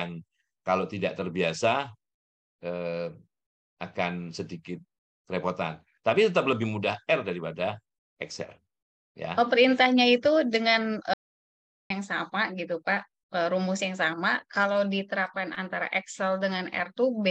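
An audio dropout to silence runs from 11.14 to 11.90 s: the sound cuts off mid-flow and returns after about 0.77 s of complete silence with no room tone. The input was likely lost briefly while recording continued writing silence, so that stretch is gone.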